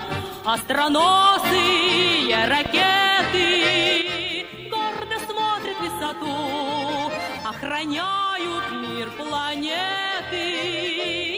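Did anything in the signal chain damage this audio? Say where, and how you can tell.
Yes. A loud pop occurs between 2.66 and 2.84 s: two sharp pops in quick succession, peaking roughly 5 dB above the surrounding sound, which carries on underneath. This likely comes from the analogue wiring, such as a plug, switch or static discharge putting a voltage pulse into the line.

A sudden gain jump occurs at 4.02 s. From there to the end, the sound and the background noise drop together by 7 dB in a single step, with no fade. That points to digital processing, likely a gain setting applied instantly, without a ramp.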